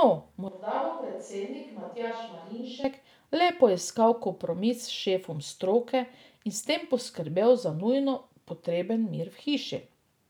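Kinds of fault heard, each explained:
Switch to a distant microphone: The speech abruptly turns hollow, roomy and thin, and drops roughly 10 dB. A farther microphone was likely used until "le poiskal kompromis".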